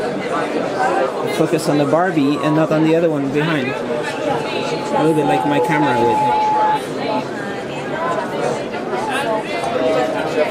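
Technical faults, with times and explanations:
3.73 to 6.81 s, loudspeaker feedback squeal: a steady tone near 857 Hz swells over roughly three seconds until it stands around 5 dB above the rest of the sound, because the microphone re-amplifies its own loudspeaker and the loop gain at that frequency exceeds one.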